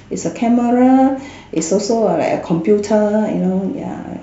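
No faults turn up anywhere in this speech recording: no dropouts, clicks, glitches or level disturbances at any point.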